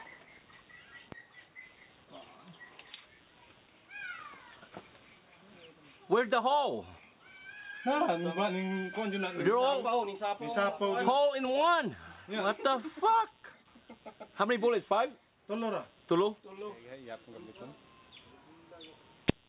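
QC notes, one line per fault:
Throughout: computer activity noise. A pulsing noise at around 150 Hz sits about 35 dB below the signal. Processor, graphics or mouse load shifts the shared audio ground, so it follows the computer's activity, not the sound. The band stops at 4 kHz, which fits a G.711 mu-law call path.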